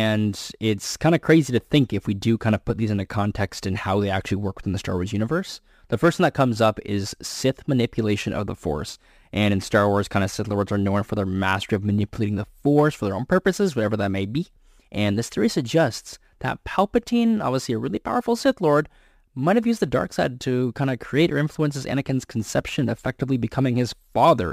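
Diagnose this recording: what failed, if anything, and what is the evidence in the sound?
The failure is at the sample-format conversion stage. A crude rate conversion runs through the whole speech recording. A gritty, inharmonic fizz rides on the louder and brighter sounds from start to finish. It sits around 30 dB below the speech. The samples were not filtered. Instead, the nearest sample was taken, so some samples were dropped in a fixed cycle. That error pattern fits a 48 kHz to 44.1 kHz step. It creates shifted, inharmonic copies of the voice.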